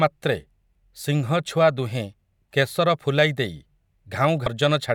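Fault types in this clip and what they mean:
Damaged data in a compressed stream: corrupted bytes near the end of this speech clip make the decoder misread frames and hunt for the next valid header. It is heard as a brief glitch of about 30 ms, showing as a short disturbance on a spectrogram and a ragged discontinuity in the waveform.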